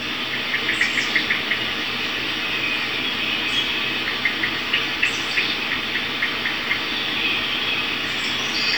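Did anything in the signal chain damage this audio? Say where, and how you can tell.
No, nothing in the signal chain damaged this sound.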